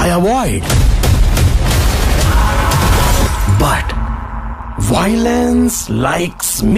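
From 3.91 s the sound gains a metallic buzz near 150 Hz, about 11 dB deep: overlap-add ripple, frames rejoined with uneven overlap gain.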